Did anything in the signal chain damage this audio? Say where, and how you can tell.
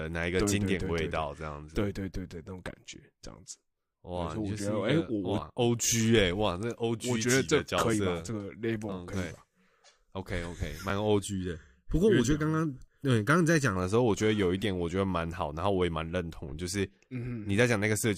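Yes. Overlap between stream segments at the network stage causes tiny skips at 2.94, 7.93, 8.92, 9.91, 10.90 and 12.88 s, on a one-second segment grid. The trimmed audio shows as abrupt waveform jumps.

Channel delay (comb filtering) from 11.25 to 13.76 s comes from mono summing. One channel lags under a millisecond, making the speech hollow. A spectrogram shows evenly spaced notches beginning around 700 Hz.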